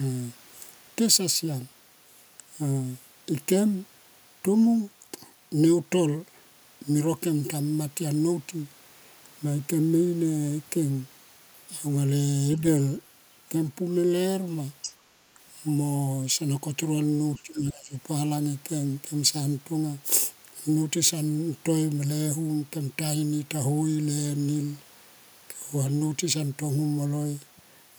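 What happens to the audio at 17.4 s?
At 17.36 s a brief trace of the other side's voice leaking through appears, lasting until 17.42 s. It is faint, sitting roughly 30 dB below the talker. The likely cause is the far-end voice playing from the talker's loudspeaker and reaching the microphone. The echo canceller did not fully subtract it, so a short scrap of that second voice slips into the signal.

Right after, from 17.42 s to 17.96 s, the talker's speech is suppressed in double talk. The voice sinks. At its deepest point the level falls by about 20 dB. In total, about half a second is affected. This is likely because both sides spoke at once. The canceller could not tell its own talker from the loudspeaker echo, so it pulled down everything it heard.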